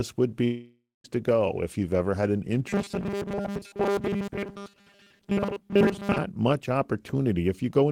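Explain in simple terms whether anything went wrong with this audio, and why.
From 0.44 to 1.05 s there is a long network dropout. About 0.6 s of speech never arrives. The last sound is stretched into a fading buzz, then goes silent before the speech returns at "to go if you've". A broken connection is the likely cause.

From 2.69 to 6.19 s, just after "you've ever had an", there is robotic sound from repeated short buffers. The voice becomes a stiff, metallic buzz at 200 Hz. That pitch fits a 5 ms chunk repeated over and over. Most of this stretch is repeats, not real speech. Audio arriving too slowly is the likely cause.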